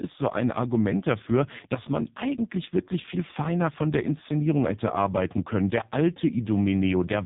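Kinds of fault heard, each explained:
AMR narrowband mobile codec: the speech comes through a low-rate mobile phone codec that rebuilds the voice from a vocal-tract model plus sparse pulses, and here it's working hard, with heavy damage, a buzzy synthetic edge pointing to roughly 5 kbps, and nothing above about 3.8 kHz.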